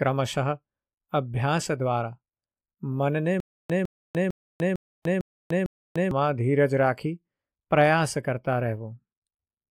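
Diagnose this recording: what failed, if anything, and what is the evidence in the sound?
Stutter with silent gaps, 3.40 to 6.11 s: a 156 ms speech fragment repeats six times, each followed by 296 ms of digital silence, giving a steady 452 ms cycle. A stalled playback buffer likely replayed its last block at each retry, and the speech due in that span is lost.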